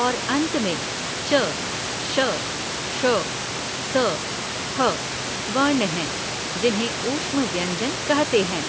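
Nothing here counts as a fault: the speech has simply gone through a call's usual microphone processing, with nothing above 8 kHz, and the room's own background noise sits about 9 dB beneath it, just as you'd expect.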